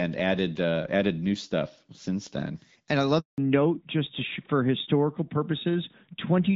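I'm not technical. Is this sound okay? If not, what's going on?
No. At 3.20 s the call was passed from one network to another, and for about 180 ms nothing got through. This handover gap makes the speech fade out and go silent until 3.38 s, and anything said in that moment is lost.

Right after the switch, at 3.38 s, the call made a fallback to narrowband, swapping the clearer HD Voice connection for an older phone codec. From then to the end, everything above 4 kHz is gone, so the speech sounds duller and rougher than before.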